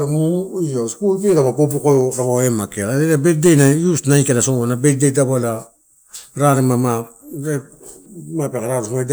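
No technical faults can be heard anywhere in the recording, and the signal stays continuous and stable throughout.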